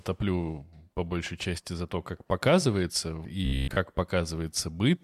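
From 3.45 to 3.77 s, new audio likely arrived too seldom, so a roughly 15 ms stretch was replayed over most of the span. This is robotic sound from repeated short buffers, heard as a rigid metallic buzz near 67 Hz.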